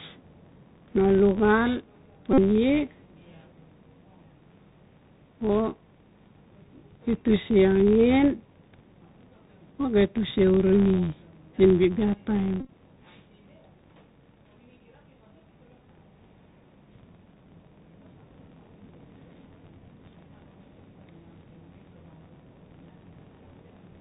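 A low buzz at about 86 Hz runs through all the speech, rising and falling with its level. This is a filter restarted on every block: it loses its state at each block boundary and starts from silence, leaving a small transient every time, a rate that fits a 512-sample buffer.

Over the whole clip the speech is also narrowband and plainly damaged, with a granular hiss underneath, scratchy s sounds, and distortion on loud high content. This is the Bluetooth CVSD headset codec, which fits a 64 kbps link. Its one-bit up-or-down steps cannot follow fast changes, and nothing above 4 kHz passes.

From 2.33 to 2.39 s, and again scattered across 12.6 to 12.69 s, the sound turns into a steady buzz near 267 Hz. This is a Bluetooth headset packet repeated. Voice packets were lost, about 45 ms in the first event, and the chip replayed the last packet every 3.75 ms until good packets returned. The second event loses about 67.5 ms in several pieces spread over 90 ms, the longest run lasting around 20 ms, so it comes through as broken bursts of buzz.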